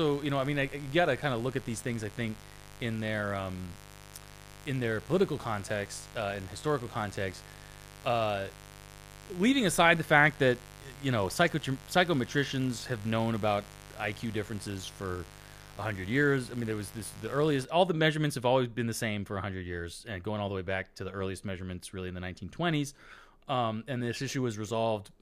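Speech with mains buzz from 0.0 to 17.65 s, ending just before "all the measurements have": switching spikes at 50 Hz mains, about 20 dB below the speech, show as dense harmonic lines stacked up the spectrogram.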